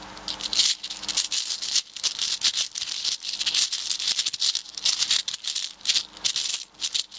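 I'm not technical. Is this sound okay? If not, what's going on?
No, there's gain pumping all the way through. Loud and soft parts end up closer in level, so the sound comes across squashed. The likely cause is a microphone turned up far too high, with an automatic limiter yanking it down on each loud moment.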